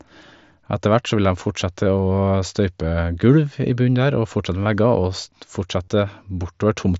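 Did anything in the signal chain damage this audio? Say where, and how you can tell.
Yes, concealed Bluetooth headset packet loss on the wireless link between headset and phone. At 4.64 s a 15 ms gap is patched over; from 5.84 to 5.88 s, 37.5 ms is patched by repeating recent waveform, giving a held buzzy tone and a slight warble on recovery.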